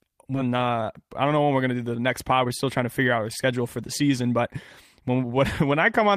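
Skip ahead at 0.35 s in this speech clip: about a second of audio was dropped while later audio was already queued, so playback jumps forward with no gap and the two sides of the missing stretch are joined almost directly. A jitter buffer speed-up runs from 0.45 to 4.42 s at 109% speed, and again from 5.01 to 5.73 s at 106%. The receiver repeatedly cut pitch-period-sized pieces to shrink a buffer that was holding too much, removing about 0.4 s in the first stretch and only a few hundredths in the second, so the speech sounds hurried at unchanged pitch.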